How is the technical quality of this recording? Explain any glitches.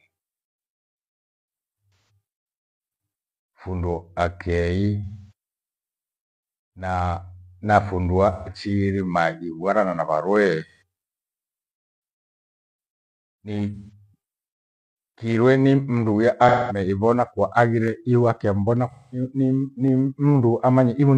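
The recording has two kinds of glitch, concealed AAC frame loss and a couple of clicks.

AAC frame loss with concealment hits at 1.94, 5.04, 8.33 (just before "maghibwana na varuwee"), 10.68 (right after "maghibwana na varuwee"), 13.75, 16.48 (between "kirwe ni mndu ya" and "ivona kwa") and 18.91 s. Each gap runs roughly 130 to 340 ms. The decoder patches it from the last good spectrum, so these stretches come out smeared and noisy rather than silent.

There are also two sharp single clicks at 17.88 and 19.88 s. The likely cause is dropped samples, a tiny fraction of a millisecond skipped. The waveform jumps straight to a later value, leaving a thin, instant tick rather than any audible gap.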